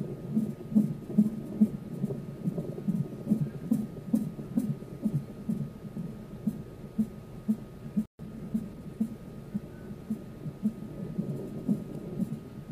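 At 8.06 s the sound cuts out in mid-flow and stays silent for about 136 ms, resuming at 8.19 s. This is a playback stall, likely caused by the player running short of data or its output thread being held up, so nothing reached the output until it recovered.

From 8.19 s to 9.09 s the audio runs hurried, about 1.15 times normal speed, yet at unchanged pitch. This is time-compressed catch-up: the player trims its backlog by removing small slices and cross-fading across the joins.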